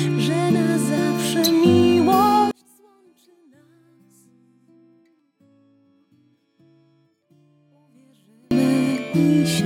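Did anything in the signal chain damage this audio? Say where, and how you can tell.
Yes. From 2.51 s to 8.51 s the sound collapses by about 36 dB, leaving only a faint residue before full level returns. That pattern points to one channel inverted, most likely a reversed-polarity connection in the analogue wiring, so that summing to mono cancels everything the two channels share. It differs from a dropout or mute because the residue never goes fully silent, and from comb filtering because the loss hits the whole spectrum at once.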